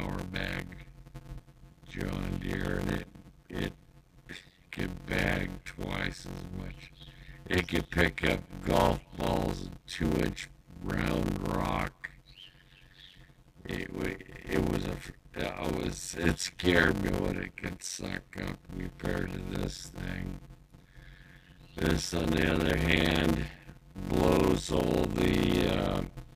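Block size mismatch (padded) runs from start to end: each block written, which fits 256 samples, is zero-padded to a longer read size, so a gap recurs at about 91.9 Hz as a steady buzz, and the audio plays at 0.533 times normal speed with its timbre unchanged.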